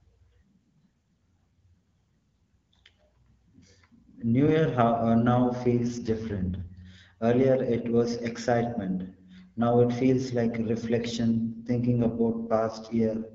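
An AMR rate drop hits this speech clip twice, from 5.63 to 6.72 s and from 11.28 s to 13.34 s, near the end. Each time the wideband voice loses its clean texture and turns rough and raspy while keeping its full bandwidth, with no dropout. That sound fits the codec being pushed down from about 12.65 to 6.6 kbit/s over a weak radio link, trading speech detail for error protection until the rate recovers.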